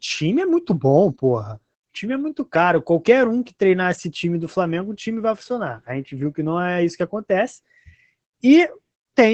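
From start to finish the speech carries Opus voice compression, running in its SILK linear-prediction mode. Nothing comes through above 8.4 kHz, so the top end is cut off at a wideband limit and the voice sounds muffled. The excitation is coded coarsely too, which leaves a plainly audible hoarse, robotic grain on the voice. All of that fits a low bitrate of around 12 kbps.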